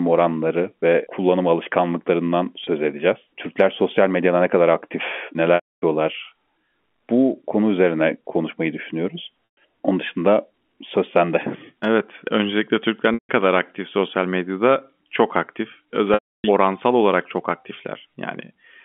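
Speech with brief buzzy, held-note stretches, the longer ones fading into gaps, at 2.64 s, 5.55–5.82 s, 9.52–9.57 s after "konu üzerine konuşmayı düşünüyoruz", 13.14–13.29 s before "kadar aktif sosyal medyada", and 16.14–16.44 s before "oransal olarak çok". This is packet loss with pitch repetition: 30 to 300 ms of audio went missing, and the receiver looped the last pitch cycle to fill each gap, letting the longer ones fade to silence. The sound is carried over G.711 telephone coding, band-limited to roughly 200 Hz to 3.4 kHz.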